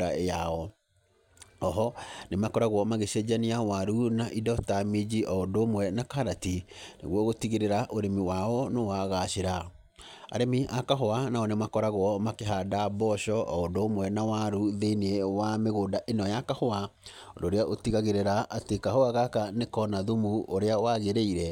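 Speech recording with a brief one channel drops out fault from 12.41 to 12.46 s. For those 50 ms the level falls abruptly by about 6 dB and then snaps back, with no fade either way. That is likely one side of the stereo signal vanishing while the mono sum keeps only the other half. On a waveform it shows as a short, sharp-edged notch where the envelope halves. A spectrogram shows a thin vertical band that is uniformly dimmer across all frequencies.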